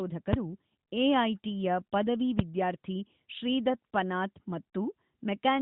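A sharp, very loud bang hits at 0.33 s and again at 2.39 s. These are invalid numbers at full scale: a calculation blew up to infinite or invalid values, and the output was pinned to one extreme value for roughly 5 ms and 3 ms, which fits 256- and 128-sample blocks.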